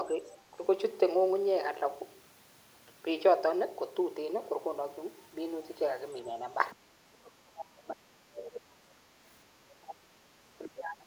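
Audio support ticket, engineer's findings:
Faint second talker in the background at 0.27–0.37 s, 6.25–6.30 s and 6.71–6.76 s, very low, around 30–35 dB under the main speech. Other side's voice leaking through; likely residual loudspeaker echo the echo canceller failed to remove from the mic.

Main talker's level collapses, dipping very deep, around 25–35 dB, at 7.21–9.01 s, 9.58–10.46 s and 10.65 s to the end. Speech suppressed in double talk; likely the echo canceller confusing near-end speech with far-end echo and attenuating both.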